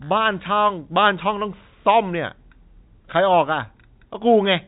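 Speech carried over G.711 telephone coding, band-limited below 4 kHz as that format dictates, with no technical faults to report.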